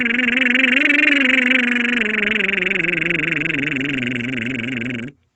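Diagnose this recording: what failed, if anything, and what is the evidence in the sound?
Nothing in this music recording points to a failure at any stage of the chain. The sound stops at 8 kHz, which fits its route through call microphone processing and an Opus call codec running at a reduced bandwidth, and that is normal behaviour for a WebRTC call path.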